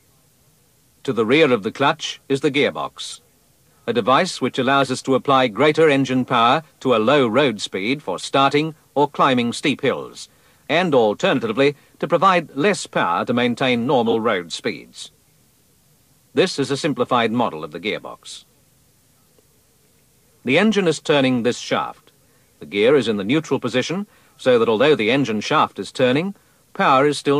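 Corrupt frames decoded: flipped bits in compressed frames misplace energy across frequency, giving brief chirps, squeaks, blips or bursts of noise at 3.09–3.16 s, 4.82 s, 8.20–8.25 s and, loudest, 14.06–14.14 s.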